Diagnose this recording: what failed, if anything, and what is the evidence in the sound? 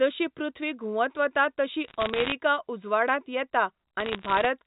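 Bit errors on a digital phone line, in transmission, cause two bursts of crackle, from 1.88 to 2.32 s and from 4.00 to 4.46 s, over an intact 4 kHz G.711 A-law path. Each flipped bit corrupts one logarithmic sample, so sign or high-bit hits give sharp, isolated ticks while the speech beneath stays continuous. Packet loss would instead leave gaps or repeats. The error rate sounds near one percent, slightly lower in the second burst.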